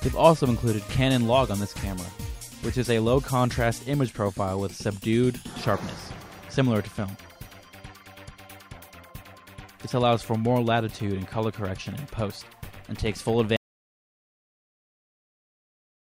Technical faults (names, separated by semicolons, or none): audio dropout to silence